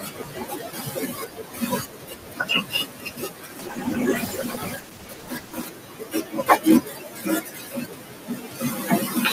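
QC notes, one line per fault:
Throughout, noise suppressor artifacts: the room noise, about 16 dB below the speech, is pushed down band by band wherever the suppressor judges it steady. It sinks in the pauses and swells back under each phrase. What sets this apart from codec coarseness is that it pumps with the pauses across the whole clip rather than sitting in one time window.
Throughout, speech cut by the noise suppressor: the suppressor mistakes parts of the speech for noise and turns down soft consonants, word endings and quiet stretches along with the background, by as much as about 18 dB at the deepest point. Those parts sound swallowed or faint while louder syllables stay full. Unlike the pumping residue, this is missing speech rather than a change in the noise. Unlike a gain drop, it strikes only the weak parts and leaves the overall level intact.
3.60–5.73 s, call bitrate drop: the encoder is forced from 64 kbps down to 16 kbps, holding the lowest rate for about 2.06 s. 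At that rate Opus quantises coarsely and trims the high frequencies, so the sound turns rough, watery and muffled before clearing once the rate recovers. The suppressor faults pump with the pauses and fall on particular sounds, but this one dulls everything at once, noise included, and stays confined to one window.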